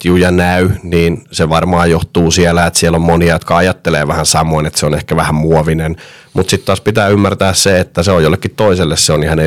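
Hard clipping runs through the whole speech clip. The signal reaches the converter or gain stage about 7 dB hotter than it can pass, so the loudest peaks are sliced flat, with roughly three percent of samples pinned at the ceiling. Those squared-off tops add high harmonics that were never in the source, heard as a gritty crackle riding on stressed syllables and loud onsets, while quieter passages slip through under the limit.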